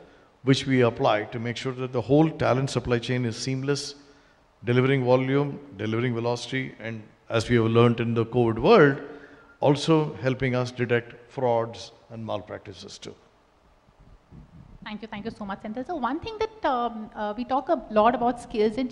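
No technical faults can be heard anywhere in the recording. Nothing in the audio stands out as needing a timestamp or a closer listen.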